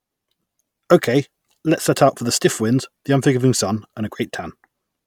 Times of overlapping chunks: none

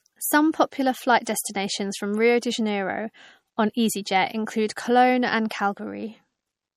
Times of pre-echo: 1.25-1.27

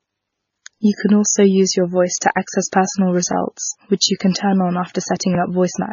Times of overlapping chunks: 5.35-5.38

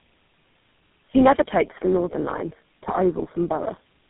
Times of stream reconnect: none

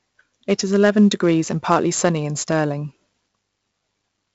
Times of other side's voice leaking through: none

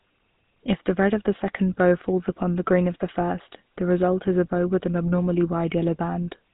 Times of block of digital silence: none

